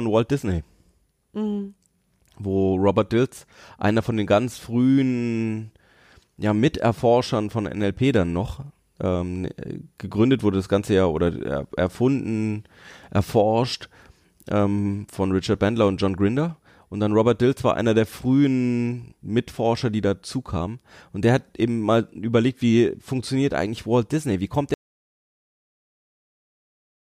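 At 24.74 s the speech just cuts to dead silence, no room tone, through the end: an audio dropout to silence, likely a lost input or stray mute.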